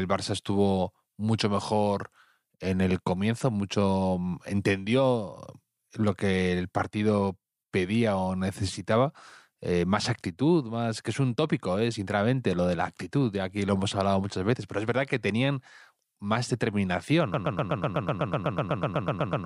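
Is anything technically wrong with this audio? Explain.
Yes. From 17.34 s to the end there is a broken-record loop. The player or stream likely stalled and kept resending its last held fragment, so a 0.12 s slice of speech repeats exactly, back to back, 17 times, and the speech that should follow is lost.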